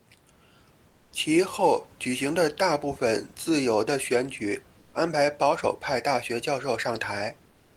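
Comfort noise in place of the background fills 0.89 to 1.11 s, just before "其后举行". For about 220 ms the room noise turns flat and featureless, about 3 dB quieter, likely because discontinuous transmission paused the sender and the receiver substituted synthetic noise.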